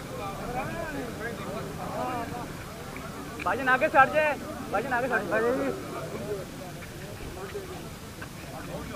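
No technical faults can be heard anywhere in the audio. There is nothing in it that calls for comment on technical grounds.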